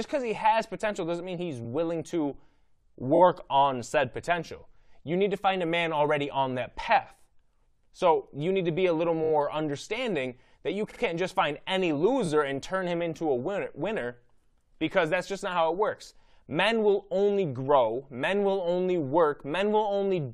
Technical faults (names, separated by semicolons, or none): repeated frames